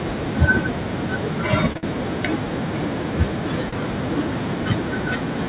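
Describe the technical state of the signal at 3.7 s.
At 3.69 to 3.74 s there is a short stall from a late packet: the jitter buffer ran dry, so the receiver stretched the last sound for about 36 ms and resumed without losing anything. It is heard as a held sound. A spectrogram shows repeated, smeared harmonics, and the waveform shows a periodic, copy-like stretch.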